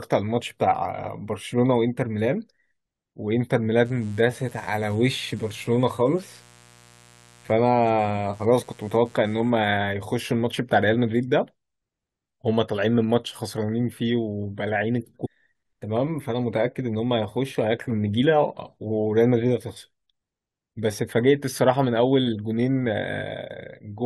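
From 3.85 s to 9.68 s a mains buzz sits under the speech: a steady, raspy hum tied to the 60 Hz supply, at roughly 30 dB below the speech. Sharp switching spikes from something like a dimmer, a rectifier or an unshielded cable have leaked in twice per mains cycle, so the interference carries a whole ladder of harmonics. On a spectrogram this shows as evenly spaced horizontal lines at multiples of 60 Hz, climbing well into the kilohertz range and beginning and ending abruptly at those two times. In the waveform, the quiet gaps between phrases carry a repeating spiky pattern at 120 pulses per second.

At 15.24 to 15.27 s there is damaged data in a compressed stream: for about 22 ms the decoder was fed corrupted bytes, misread or discarded the frames there and lost sync until it found the next valid frame header. The result is a brief synthetic blip or chirp that interrupts the speech. On a spectrogram it appears as a narrow vertical smear of odd, unnatural energy that breaks the harmonic pattern of the speech, and in the waveform as a short patch of garbled or abruptly cut signal.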